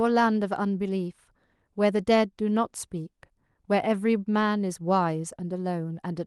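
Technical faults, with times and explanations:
Nothing here counts as a technical fault; the speech comes across as you'd expect from a call path, with the Opus codec's top end stopping around 12 kHz.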